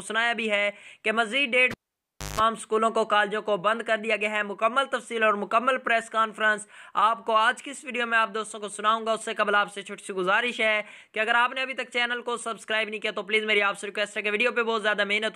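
At 1.71 s a cable is pulled and plugged in while the signal is live. A pop marks the break, and the sound drops to near silence for about 640 ms while the connection is open. As the plug goes back in, only the tip makes contact at first, so the input picks up 50 Hz mains hum as a buzz lasting roughly 170 ms. A second pop at 2.40 s marks full contact and the audio returning.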